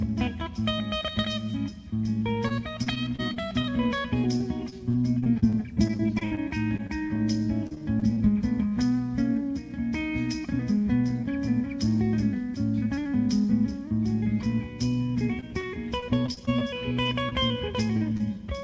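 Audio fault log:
2.48–8.18 s, repeated packet loss (robotic sound): this stretch keeps breaking up, with 28 separate holes where packets didn't arrive in time. Each one gets patched by stretching out whatever sound came just before, so about 0.64 s of the audio here is invented filler, roughly a tenth of the span. The longest hole is 62 ms. Patches and gaps come back-to-back, so you get that choppy, robotic texture with bits chewed out.
15.40–17.33 s, repeated packet loss (robotic sound): same thing again but shorter. Ten gaps this time, none longer than 28 ms, adding up to about 0.2 s of concealed audio, again around a tenth of the stretch. The sound stutters and loses little slivers as the receiver keeps smoothing over missing pieces with continuations of the last thing it heard.
17.97 s and 18.17 s, short concealed packet loss: two quick isolated dropouts near the end, about 40 ms and 20 ms long. 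Each time the receiver bridges the hole by extending the preceding sound, pitched if it was voiced, noise-like if not, then fades back into the real signal. What you hear is a tiny smear or wobble, and a short sound landing in one of those windows can simply disappear.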